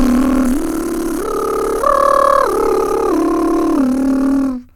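Nothing stood out on listening to this short music excerpt.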